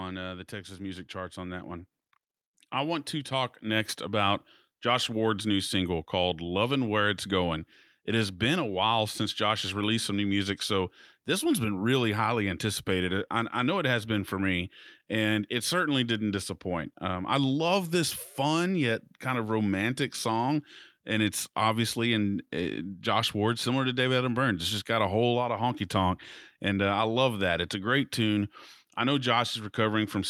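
Right after "uh the", at 0.49 s, the level starts creeping up: automatic gain rising, about 6 dB over roughly a second and a half until 1.96 s. The AGC decided the input was too quiet and nudged its gain up, so the voice and the room noise swell together. It does it again from 2.75 to 4.42 s, about 5 dB this time, with the same slow lift of everything at once.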